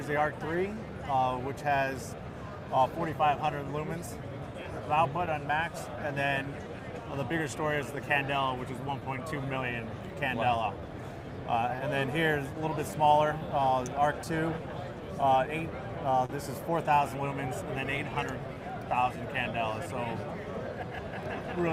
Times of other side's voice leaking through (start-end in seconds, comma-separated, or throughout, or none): none